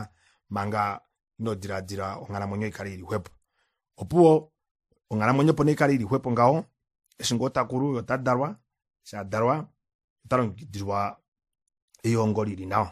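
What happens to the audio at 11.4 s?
At 11.4 s the speech carries the same layered compression damage heard throughout: nothing above 14.6 kHz, with the artefacts of both codecs heard together. The likely cause is transcoding between lossy codecs, a WMA-style encode re-encoded as low-rate MP3. Unlike single-codec compression, two distinct artefact textures sound together.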